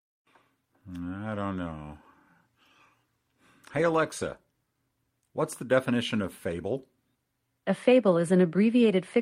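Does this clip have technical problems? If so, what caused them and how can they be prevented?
No, the speech signal comes through without any audible technical fault, so nothing here needs a cause or a preventive fix.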